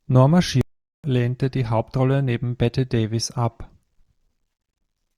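At 0.61 s the speech halts abruptly in mid-flow, and nothing is heard until 1.04 s, when it picks up again at "lehnte die". This is a playback stall lasting about 430 ms, most likely the player running short of data or having its output thread held up. On a waveform the gap is a flat, near-silent line between two clean edges, and on a spectrogram it is an empty vertical band across all frequencies.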